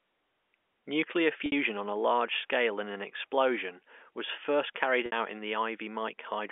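Speech over a telephone-band line has packet loss with pitch repetition at 1.46 s, just before "on a large scale," and at 5.06 s, after "explosion was first carried," each lasting about 60 ms, consistent with three 20 ms packets. Unlike a plain dropout's abrupt silence, each gap briefly holds a buzzy repeated pitch that fades before the speech cross-fades back.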